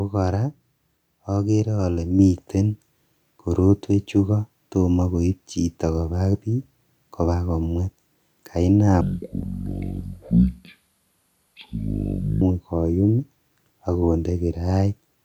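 At 2.19 s the voice and the room behind it jump up together by about 4 dB, an abrupt step rather than a swell. This is a microphone volume stepped up: the call software judged the input too quiet and raised the device's input level in one move.

From 9.01 s to 12.41 s the speech drags, slow and deep, about ten semitones lower and playing at 0.57 times its proper rate. This is a section at the wrong speed, likely from an editor or player fitting that stretch to the wrong clock.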